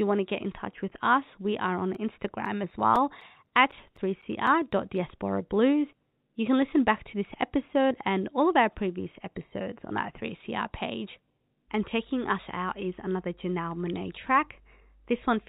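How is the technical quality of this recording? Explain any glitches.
The recording's main flaw is a short run of disc-scratch ticks early on, heard through narrow telephone-band speech from G.711 coding that cuts everything above 4 kHz.

CD scratch ticks run from about 1.95 s to 5.23 s: fourteen clicks at roughly four per second. A scratch on the disc spoiled more data than error correction could repair on each rotation, so the player patched or muted the damaged samples. Each tick is a brief dropout or click, the longest around 10 ms, uneven in strength.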